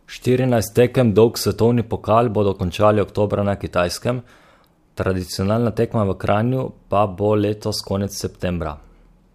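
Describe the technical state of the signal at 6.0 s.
At 6.0 s the speech signal is intact, with no audible fault at that point.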